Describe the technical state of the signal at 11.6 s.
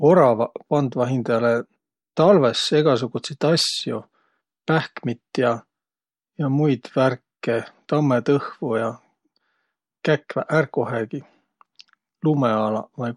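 The speech at 11.6 s is intact, with no audible fault at that moment.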